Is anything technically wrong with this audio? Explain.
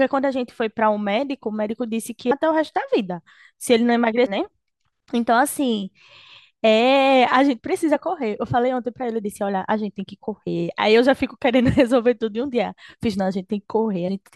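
Yes, there are two kinds of fault in this speech clip. First, damaged data in a compressed stream shows up four times: at 2.30 s, from 4.25 to 4.27 s, from 7.94 to 7.96 s, and at 14.07 s. In each case the decoder hit corrupted frames, lost sync and had to hunt for the next valid header, so you get a brief glitch of around 20 ms.

Second, there's a bit error spike at 8.77 s, a single sample where one flipped bit knocked the value off by a power of two before it snapped straight back. It comes through as one sharp, broadband tick that has nothing to do with the speech around it.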